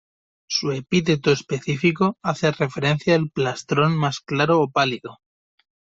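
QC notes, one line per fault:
No faults detected on this speech recording.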